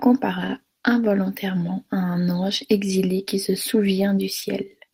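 Clock drift between sender and receiver runs through the whole clip: the sending clock is roughly 4% slower than the receiving one. The jitter buffer keeps draining, so the receiver must pad with repeated fragments. Unlike packet loss, the hiccups all push one way, spread unevenly throughout.

Repeated timing corrections fill the stretch from 0.08 to 4.86 s. The receiver keeps inserting small repeated pieces, playing the speech at about 96% speed and adding roughly a fifth of a second overall. It sounds like slight hiccups and an unsteady tempo rather than one smooth, uniform slowdown.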